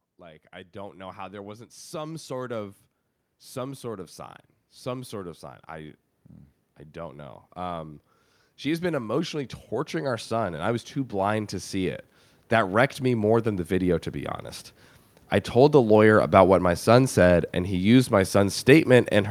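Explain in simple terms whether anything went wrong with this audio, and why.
Automatic gain rising happens twice, from 0.05 to 4.18 s, ending before "some sort of sign", and from 8.44 to 14.42 s. The input seemed too quiet, so the recorder slowly turned itself up. Voice and background grow louder together.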